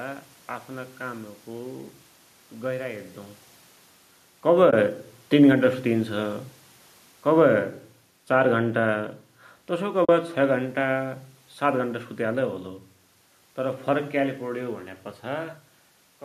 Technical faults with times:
4.71-4.73 AAC frame loss with muting
9.70-12.55 automatic gain falling
10.05-10.09 AAC frame loss with muting

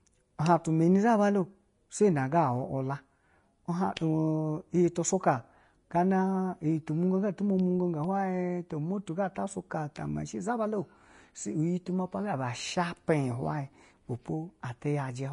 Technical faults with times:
0.00-15.33 Vorbis compression

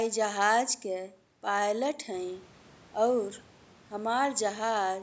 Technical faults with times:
none

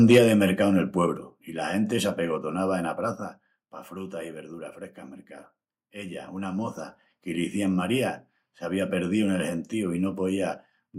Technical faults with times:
0.10-0.18 microphone overload
0.18 microphone volume stepped down
1.17 microphone volume stepped down

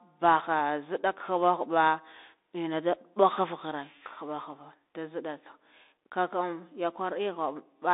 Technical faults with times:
0.00-7.93 Bluetooth CVSD headset codec

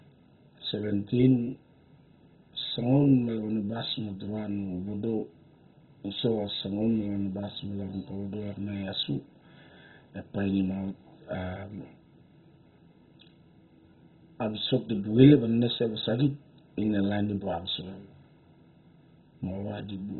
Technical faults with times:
0.00-20.19 MP2 compression

